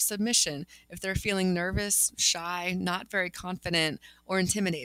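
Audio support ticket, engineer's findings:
Noise suppressor applied to music or sounds, whole clip. Level pumps by roughly 5 dB as a speech-tuned suppressor mistakes sustained content and tails for noise. Waveform: envelope breathing, decays clipped short. Spectrogram: held partials and reverb fading unevenly while onsets stay intact.

Sound cut by the noise suppressor, 0.70–0.92 s and 4.04–4.29 s. Steady content dips up to about 12 dB as the suppressor clamps down harder. Waveform: amplitude notch. Spectrogram: faded horizontal bands, transients still crisp.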